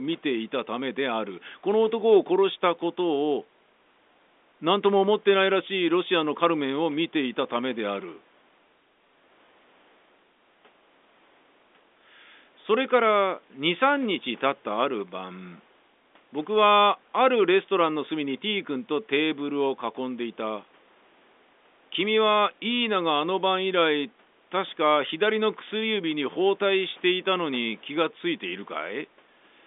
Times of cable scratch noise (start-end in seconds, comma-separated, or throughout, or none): none